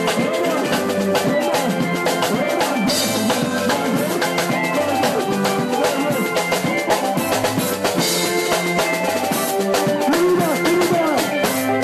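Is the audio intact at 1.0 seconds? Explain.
Yes, the audio is intact at 1.0 seconds, with no dropout, click, distortion or other fault at that moment.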